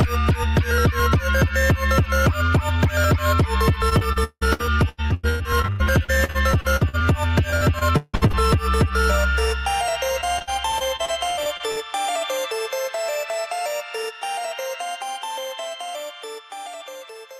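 Packets went missing or arrived too late, again and again, in three bursts of repeated packet loss (robotic sound): 3.89 to 7.02 s, 7.50 to 8.35 s, and 10.21 to 11.78 s. Each hole was patched by stretching the last good sound forward, with holes up to 173 ms long. About a third of the first stretch, about 41% of the second and about a fifth of the third is filled-in sound, which comes through choppy with pieces missing.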